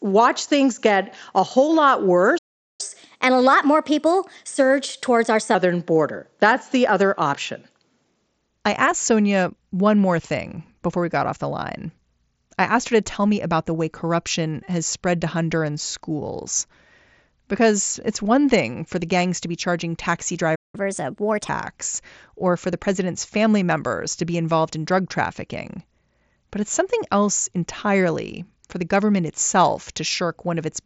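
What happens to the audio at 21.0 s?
At 21.0 s the speech is in a burst of catch-up at higher speed, running from 20.75 s to 21.49 s. After a stall, the player works through its queued audio faster to recover the lost time. It resamples at 1.25 times normal speed, so tempo and pitch rise together, by roughly four semitones. The speech sounds hurried and higher, with a chipmunk edge. It then settles back to normal pace and pitch.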